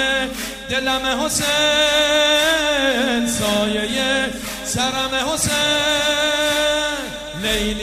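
Nothing goes wrong anywhere in this clip: no glitches, dropouts or other technical faults turn up at any point.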